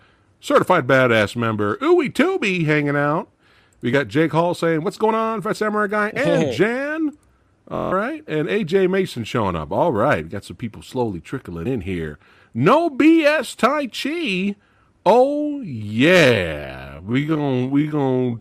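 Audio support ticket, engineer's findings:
Buzzing machine-gun stutter, 7.76 to 7.92 s, short slice replayed until audio resumes further on. Bluetooth stutter: receiver repeated its last buffer over about 160 ms of missing data, which fits a run of roughly seven lost packets on the wireless link.

Abrupt slowdown from 15.41 s to end, pitch unchanged, speech dragging. Time-stretched section, playing at about 0.55 times normal speed; likely cause is software stretching to fit a length, repeating short pieces to preserve pitch.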